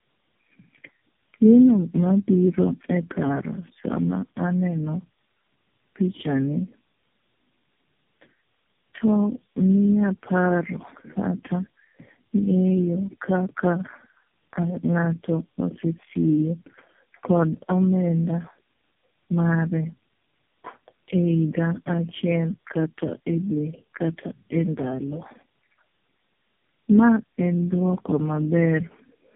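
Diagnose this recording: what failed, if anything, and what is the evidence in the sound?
The codec stage failed: the call passed through tandem speech coding, decoded and re-encoded at each network border, with four low-rate speech coders in a row. Throughout the speech, nothing reaches above 3.5 kHz, giving a boxed-in, muffled band, and voiced sounds carry a rough, warbling texture. That compounded damage fits a chain such as AMR-NB, GSM full rate, G.729A and AMR-NB again, each coder modelling the previous one's artefacts as if they were speech.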